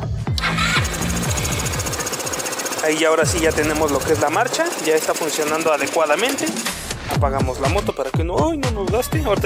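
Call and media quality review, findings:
Nothing to flag here; no audible faults turned up anywhere in the clip.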